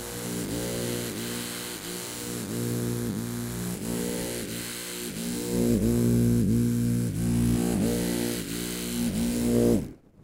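From the start to 3.72 s, a steady, thin buzz sits under the everyday sound, pitched at 100 Hz and thick with harmonics, roughly 20 dB below it. This is DECT cordless phone buzz: a nearby handset or base sends a radio burst every 10 ms, and the audio circuitry rectifies it into sound.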